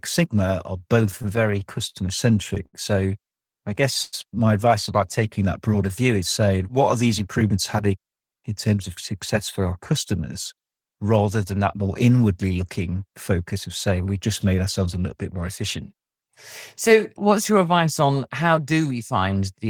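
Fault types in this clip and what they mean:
repeated stalls (stutter): late packets emptied the buffer seven times between 1.11 and 1.96 s, each gap filled by stretching sound, longest 47 ms, so the speech drags unevenly rather than holding once.
short stall from a late packet: one late packet at 2.66 s made the receiver hold the last sound for 75 ms, a single brief drawn-out moment, not a chain.
call audio freeze: from 4.02 to 4.15 s the sound turns into a fading 103 ms buzz, likely from packets held up in transit, longer than a brief stretch.
jitter buffer speed-up: between 6.94 and 8.35 s short pitch-period slices are cut, roughly 150 ms in total, so the speech runs about 10% faster at unchanged pitch.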